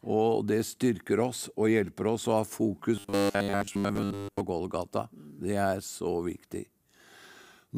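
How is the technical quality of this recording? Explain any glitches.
Robotic sound from repeated short buffers runs from 2.96 to 4.42 s. Across that stretch the speech collapses into a rigid, metallic buzz at a fixed 100 Hz, still loosely tracking the syllables. The likely cause is audio arriving too slowly, so the playback repeats its last fragment, roughly 10 ms long given the 100 Hz buzz, while most of the real audio in that span is skipped.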